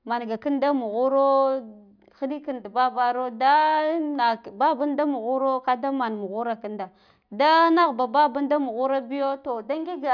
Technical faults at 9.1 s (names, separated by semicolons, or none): none